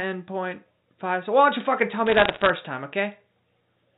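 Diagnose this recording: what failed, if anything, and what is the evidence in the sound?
Bit errors on a digital phone line, in the network stage. From 2.07 to 2.5 s, sharp ticks crackle over otherwise intact speech. Each flipped bit corrupts a single A-law sample. Hits on sign or high-order bits jump far, at an error rate under one percent.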